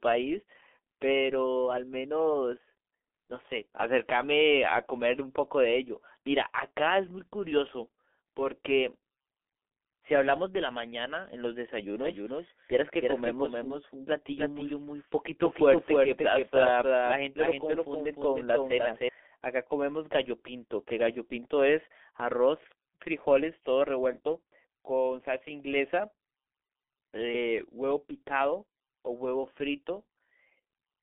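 Throughout, the speech carries heavy G.723.1 codec damage. Nothing passes above 3.6 kHz. Consonants blur and the tone turns muffled and hoarse, which fits a very low bitrate near 6 kbit/s.

From 11.99 to 19.09 s, a doubled audio track appears. A full-band copy trails by roughly 300 ms, a few dB quieter. It starts and stops abruptly, likely from a second, slower capture path.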